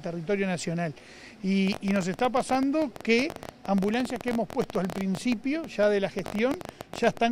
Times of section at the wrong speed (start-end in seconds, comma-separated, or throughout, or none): none